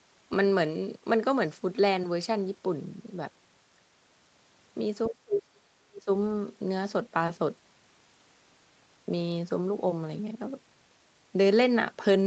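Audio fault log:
5.08–6.08 s, speech suppressed in double talk: the speech drops away sharply, by around 40 dB at its deepest, for about a second. Both sides were likely talking at once, and the echo canceller mistook the talker for loudspeaker echo and pulled it down.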